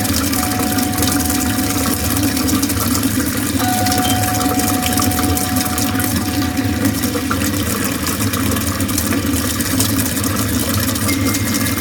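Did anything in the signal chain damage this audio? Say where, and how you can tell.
Yes. The audio shows hard clipping throughout, most likely at the converter or a fixed-point gain stage ahead of it, where the level was driven about 16 dB past what the stage could carry. Only around one percent of samples reach the ceiling, so the damage sits on the peaks: each transient in these everyday sounds is sliced flat, and the squared-off tops throw harmonics high into the spectrum, heard as a crackly, gritty edge on every loud moment.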